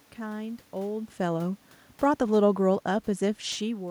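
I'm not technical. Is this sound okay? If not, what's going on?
Yes, no faults here.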